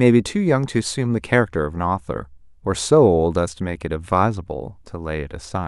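No dropouts, clicks, distortion, level jumps or timing breaks turn up anywhere in the recording; nothing to report.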